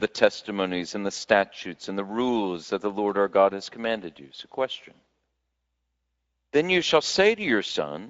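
Speex codec damage runs throughout: too few excitation bits, fitting a 16.8 kbps setting, leave the speech plainly rough, with nothing above 7.7 kHz.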